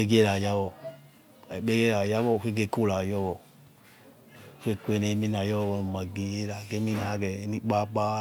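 No technical faults are audible.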